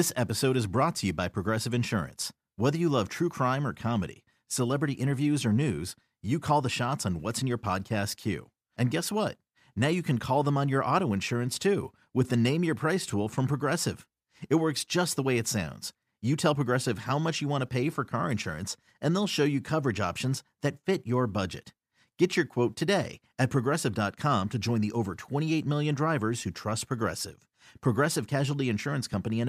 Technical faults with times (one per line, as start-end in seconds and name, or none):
none